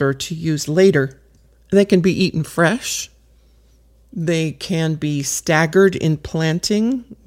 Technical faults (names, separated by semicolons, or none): none